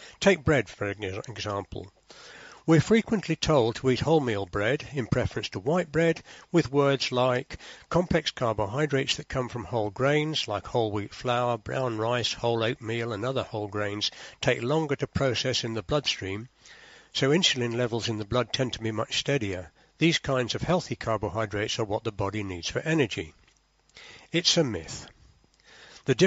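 No technical faults can be heard anywhere in the audio. It has passed through a call's microphone processing, which trims away the lowest bass and leaves nothing above 8 kHz, and that is normal for this path.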